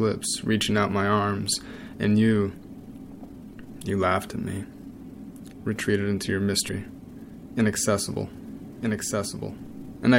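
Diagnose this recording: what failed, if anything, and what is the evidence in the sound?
At 6.68 s the audio lurches forward with a short smeared blip instead of a click: compressed frames skipped. It is a codec or storage fault, where about three frames, roughly 70 ms, are lost. That fits a frame length of 26.1 ms, and overlapping frames blur the join.

From 8.12 s to the end a second full-band copy of the sound runs about 1.5 s behind, a few dB quieter, with no decay or room colour, and it starts abruptly. This is a doubled audio track, likely from a slower capture path or an edit mixing in a second, offset copy.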